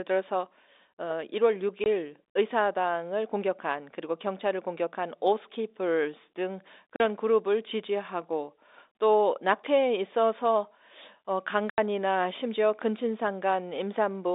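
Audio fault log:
1.84–1.86 s, 6.96–7.00 s, 11.70–11.78 s: packet loss filled with silence. The sound drops out abruptly for 20, 40 and 80 ms, with hard edges, because missing packets, which fit a 20 ms packet size, were replaced by silence in the telephone-band audio.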